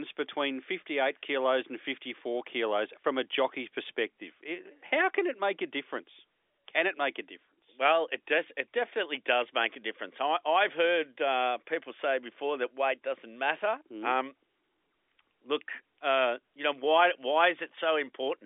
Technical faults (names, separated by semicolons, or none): none